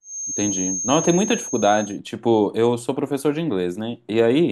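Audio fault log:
0.0–2.0 s, feedback whistle: a thin, steady tone at 6.4 kHz sits around 10 dB under the speech and swells and fades slowly in level, likely from a loudspeaker-to-microphone loop held just at the edge of feedback. Unlike runaway howl, it never builds up.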